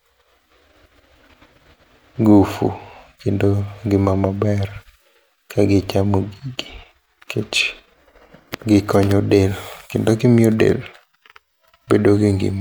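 Nothing here jumps out as a technical fault at any point, so there's really nothing to flag.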